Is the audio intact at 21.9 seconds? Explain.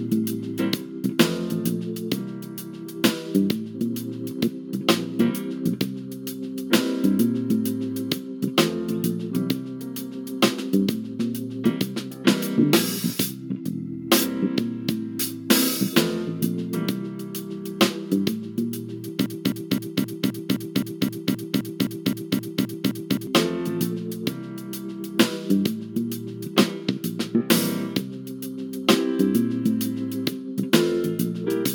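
No. At 21.9 seconds the clip is in the middle of a broken-record loop that runs from 19.26 to 23.27 s. A fragment of about 0.26 s plays back to back, 15 times in a row, identical each pass. It sounds like a rapid, mechanical stutter. The player or stream likely stalled and kept resending the last piece it held. Whatever should have played in those four seconds is missing.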